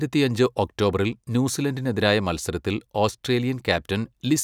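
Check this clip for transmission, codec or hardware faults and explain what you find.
No transmission, codec or hardware faults.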